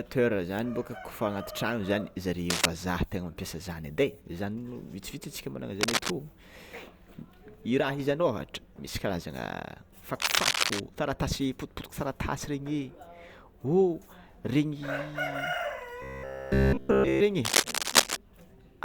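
Cable scratch noise breaks in at 2.49 to 2.66 s, 5.81 to 6.11 s and 10.20 to 10.80 s: dense, ragged bursts of scratching laid over the speech. The first and third sit a little louder than the voice; the second is about level with it. The likely cause is a worn cable or connector being moved, its contact resistance fluctuating. Unlike isolated clicks or steady crackle, these come as rough, irregular clusters that start and stop with the disturbance.

From 16.02 to 17.21 s the speech collapses into a robotic sound from repeated short buffers: a rigid, metallic buzz at 66.8 Hz that still tracks the rough shape of the speech, with essentially all of the stretch made of repeats. This likely comes from audio arriving too slowly, so one short chunk of about 15 ms is replayed while real audio is skipped. Unlike mains hum, the buzz exists only while speech runs and follows its rhythm.

Cable scratch noise returns from 17.45 to 18.18 s, again a little louder than the speech.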